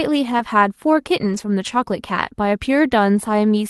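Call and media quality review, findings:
Short concealed packet loss, 0.37 to 0.41 s: brief smear and wobble, no hard gap. Probable component: jitter buffer and decoder concealment. About 20 ms of audio arrived too late or not at all. The decoder extended the preceding sound for roughly 16 ms, then cross-faded back into real signal. A short sound in that window may be lost.

Lost packet rebuilt from error correction, 0.39 to 0.41 s: 20 ms of rougher, grainier texture, no dropout. Probable component: Opus in-band FEC. The missing frame was replaced with the low-bitrate redundant copy carried in the next packet, overlapping the concealment above. Second instance, 1.21 to 1.43 s: 120 ms of audibly coarser, noisier sound, consistent with six separate lost packets each recovered from its successor's copy.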